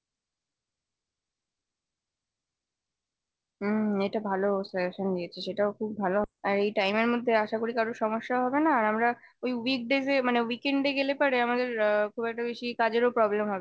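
At about 6.24 s there's a skip ahead. Roughly a second of speech just vanishes, with nothing filled in, so the talker lurches forward and the two sides butt together almost seamlessly, like a bad tape splice. The jump also cut the playout delay by about a second. Right after, from 6.90 to 7.71 s, comes a jitter buffer speed-up: the receiver snipped out tiny pitch-period slices, roughly 70 ms in total, so the voice runs at about 108% speed. It sounds a touch hurried, but the pitch holds steady. Throughout, the top end stops at 8 kHz, which fits a G.722 call path.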